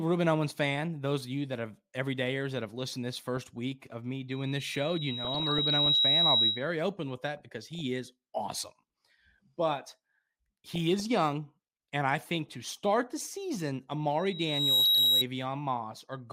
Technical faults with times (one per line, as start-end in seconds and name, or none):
3.37-3.57 DAB burbling
4.30-6.69 loudspeaker feedback squeal
5.25-5.95 DAB burbling
7.37-7.81 DAB burbling
10.67-11.06 DAB burbling
12.49-12.79 DAB burbling
14.19-15.24 loudspeaker feedback squeal
14.82-15.03 DAB burbling